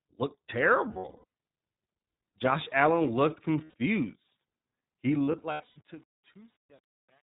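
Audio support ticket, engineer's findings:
Whole clip: narrowband, slightly rough and synthetic speech, nothing above 4 kHz. iLBC codec; the damage is plainly audible. The character fits its 20 ms-frame, 15.2 kbps mode, each frame's excitation coded independently of the previous one.

0.88–1.24 s, 3.64–3.74 s, 5.24–5.78 s: held, buzzy-breathy vowel-like patches where the sound should continue. Lost iLBC frames: the decoder repeats the last pitch cycle with noise. About 300 ms lost across 440 ms, then a single 100 ms gap, then 280 ms across 520 ms. The longest runs in the scattered losses are around 70 ms. Recovery is near-immediate each time.

5.04 s to end: the fade-out, which runs from about 5 s to 7.36 s, turns gritty, worst from 5.5 s. Truncation distortion on a fade: an undithered gain stage keeping too few bits, consistent with roughly a 9-bit word length.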